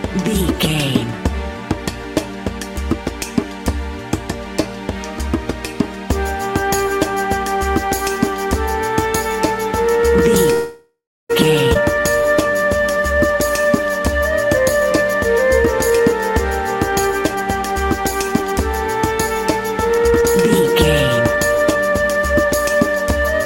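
Call audio freeze at 10.53 to 11.31 s: the sound stops moving and the last moment is stretched into a fading buzz that falls to silence for about 0.33 s. This is likely a jitter buffer running dry while packets were held up. When playback resumes it continues from where it stopped, so about 0.76 s of gap has been inserted and nothing is lost.

Skip ahead at 11.73 to 11.77 s: playback lurches forward with almost no gap. Roughly a third of a second of audio has been discarded, and the two sides are butted together. The stretch was dropped either on the way or by an overflowing jitter buffer while later audio was already waiting.

Jitter buffer slow-down from 11.82 to 14.20 s: the sound runs at about 90% speed with its pitch unchanged. Sustained parts are drawn out. The receiver repeated single pitch periods many times to rebuild its reserve, adding about 0.24 s in total.

Jitter buffer speed-up in four stretches: 14.47 to 16.13 s at 108%, 16.91 to 18.54 s at 112%, 19.94 to 20.73 s at 124%, and 21.19 to 22.98 s at 107%. 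The pitch holds but the sound feels rushed, most of all in the 124% stretch. To shrink an overfull buffer, the receiver repeatedly cut out tiny pitch-period slices, removing roughly 0.15 to 0.2 s in each stretch.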